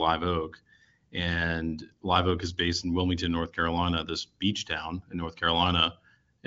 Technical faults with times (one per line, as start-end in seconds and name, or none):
none